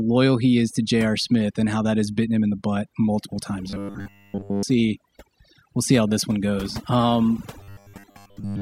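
Throughout this speech clip the background sits at near silence with faint twinkling specks: the signature of overdone noise removal. The reduction was set so aggressively that individual frequency bands lying close to its noise estimate are pulled right down or switched off, so the quieter components of the speech vanish along with the hiss.

Two passages turn into a rigid metallic buzz pitched at 100 Hz while the speech contour still faintly follows along. The first runs from 3.70 to 4.63 s, right after "the butt multiple times", and sounds completely buzzy. The second covers 7.59 s to the end, with most of that stretch affected. This is robotic sound from repeated short buffers. Audio was likely arriving too seldom, so playback kept looping the last 10 ms of sound and skipped the real material in between. That fixed repeat imposes the steady 100 Hz pitch.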